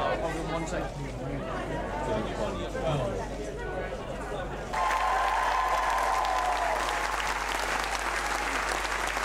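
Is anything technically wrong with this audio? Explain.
Yes. Mains hum runs throughout: a ground loop or nearby transformer leaks the 50 Hz power line into the signal, heard as a steady, fairly loud tone, unlike broadband low rumble.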